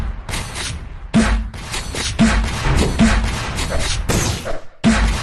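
No technical faults are audible.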